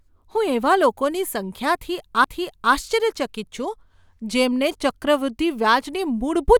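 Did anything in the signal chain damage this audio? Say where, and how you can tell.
Yes: a CD skip at playback, at 2.24 s just after "હું એવા લોકોની", where a brief mute of a few milliseconds precedes the speech resuming from a different point on the disc spiral.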